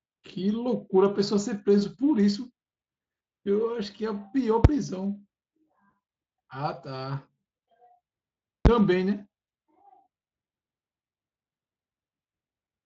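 A speech clip with two brief bangs from invalid numbers at full scale, at 4.65 s and 8.66 s. At each point a calculation yielded infinite or invalid values that became the largest positive or negative value, pinning the output at one extreme for about 5 ms and then about 10 ms. Blocks that short collapse into a single loud crack rather than a separate pop at each edge. The Speex coding underneath is light, with the band ending near 7.5 kHz.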